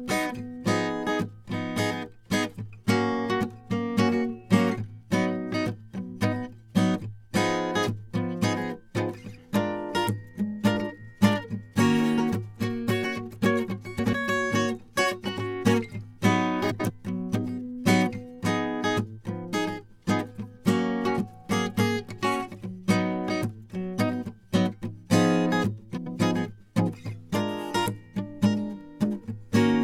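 At 13.99 to 14.14 s, 16.70 to 16.90 s and 25.97 to 26.17 s the music hits frames out of order: two adjacent runs of frames got swapped, so each stretch plays its second half first. You hear a brief garbled flutter. Block lengths of 69.7 ms for the first swap and 92.9 ms for the other two point to three and four frames per run, and no time goes missing.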